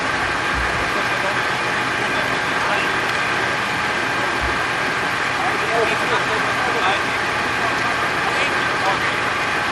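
No technical faults can be heard anywhere in this audio.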